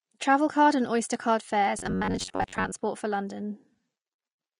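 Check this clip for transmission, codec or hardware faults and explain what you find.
Two faults are audible, one throughout and one brief.

Throughout, the speech carries plainly audible codec damage, likely from Vorbis compression at a low bitrate, around 33 kbps. Coarse treble quantisation makes it hissy and grainy. A spectrogram shows a lowered treble cut-off.

From 1.79 to 2.73 s, short stretches of about 11 ms repeat, with roughly half the audio replaced. This is likely a robotic sound from repeated short buffers, imposing a rigid 93.8 Hz metallic buzz. The waveform shows identical repeating cycles, and a spectrogram shows evenly spaced harmonic lines.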